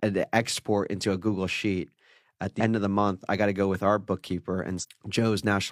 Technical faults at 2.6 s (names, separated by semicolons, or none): damaged data in a compressed stream